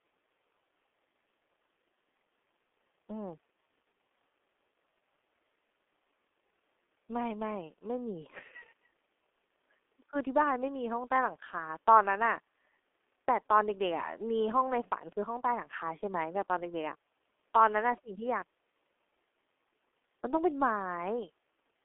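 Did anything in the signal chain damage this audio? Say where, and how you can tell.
Yes: a G.723.1 codec throughout. Speech is muffled and hoarse, with nothing above 3.8 kHz and consonants smeared, unlike a clean band-limited line, fitting roughly 6 kbit/s.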